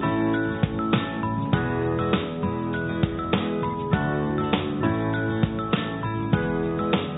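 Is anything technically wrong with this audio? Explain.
No, nothing technically wrong can be heard anywhere in this audio.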